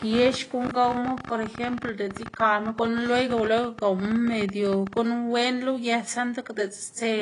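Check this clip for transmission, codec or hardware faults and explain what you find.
Two faults stand out in this speech clip: a train of clicks over the first five seconds, and compression damage throughout.

From 0.02 s to 4.98 s a train of clicks runs at about 15 per second with uneven spacing, around seventy in all, peaking a few dB above the speech. Pulses of similar shape, likely from interference or a faulty connection, tick over both speech and pauses.

Across the whole clip the sound is dull and smeared, with a warbling, fizzy texture on sustained vowels and sibilants. This likely comes from AAC compression, AAC-LC at a low rate consistent with about 32 kbps. The coder drops high frequencies and leaves spectral holes or noise-filled bands. The low room noise, about 36 dB below the speech, is part of the recording rather than a fault.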